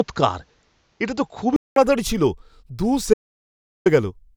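Speech, with two distinct faults. From the start to 1.76 s the input sounds as if it was switched to a poorer device. The band stops at 7.6 kHz, the level sits roughly 5 dB off, and faint new background noise appears. A 200 ms silence at the switch, before "ছিল দু", separates this from a gradual filter or EQ change. Later, after "ছিল দু", an audio dropout to silence runs from 3.14 to 3.86 s, about 720 ms of silence with no room tone, unlike a quiet pause or a concealed packet loss. A briefly lost input link is the likely cause.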